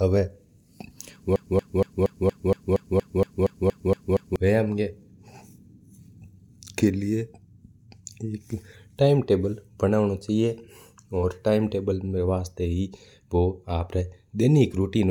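At 1.36 s the speech falls into a broken-record loop: a 234 ms fragment repeats back to back, 13 times over, until 4.36 s. Likely the player or stream stalled and kept replaying its last buffer, so whatever belonged in those three seconds is gone.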